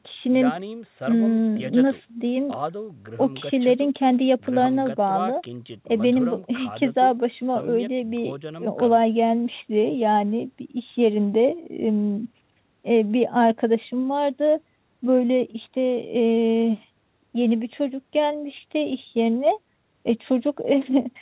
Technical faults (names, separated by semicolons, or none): none